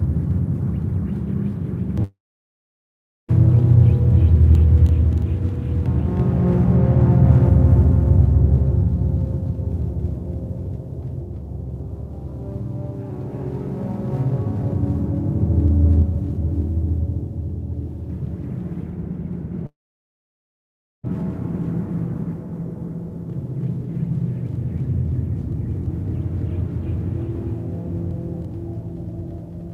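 Everyday sounds, cut out twice, from 2.03 to 3.30 s and from 19.66 to 21.14 s. A brief fading tail gives way to about 1.1 and 1.3 s of silence, and the sound resumes further on. This points to a long network dropout as the likely cause. It is longer than a packet-loss click and, unlike a clean edit, it fades and skips material.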